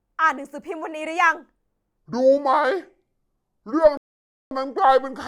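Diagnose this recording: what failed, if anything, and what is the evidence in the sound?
From 1.97 s to the end, the speech plays at 0.659 times its recorded speed. It drops about seven semitones and drags. Pitch and tempo fall together, so this is a section at the wrong speed. The likely stage is editing or playback, with the audio clocked at the wrong rate.

A rebuffering stall sits at 3.97 s. The sound cuts to silence until 4.51 s, then resumes exactly where it stopped. Nothing is missing, but 538 ms is added. This is a network and playback buffer fault: the player ran dry and waited for data.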